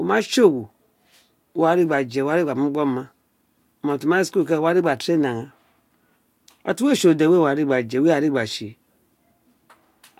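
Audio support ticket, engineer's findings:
Listened through the whole speech clip and found nothing to flag, so no fault to report on this one.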